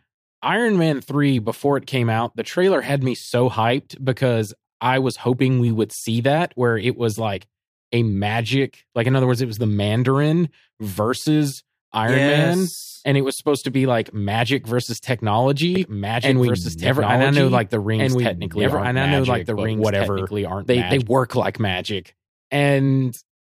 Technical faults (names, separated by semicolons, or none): doubled audio track